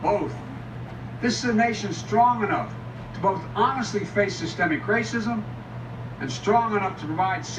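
At 4.74 to 4.76 s a corrupt frame was decoded: bits inside what sounds like a single compressed frame were flipped, and the decoder played it anyway, placing energy at the wrong frequencies. The result is a brief chirp, squeak, blip or burst of noise, peaking around -25 dBFS.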